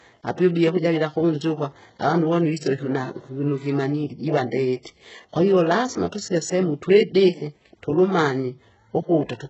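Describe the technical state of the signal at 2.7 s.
At 2.7 s the speech carries the same damage that runs through the whole clip: heavy artefacts consistent with likely HE-AAC compression at a very low rate, which fits a bitrate around 8 kbps. The core codec keeps only the lower spectrum, and the treble is rebuilt by spectral band replication, copying lower bands upward under a coarse envelope. Nothing is present above 8 kHz, and s sounds come across gritty, metallic or lispy rather than clean.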